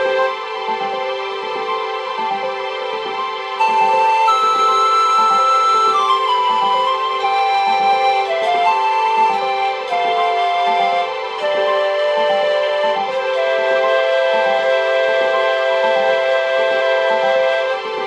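Compressed frames skipped: whole frames went missing or were rejected by the decoder, so playback leaps ahead by steps that fit a frame of about 46 ms. Jumps occur at 5.34, 7.20, 12.64 (losing about 0.7 s) and 16.77 s.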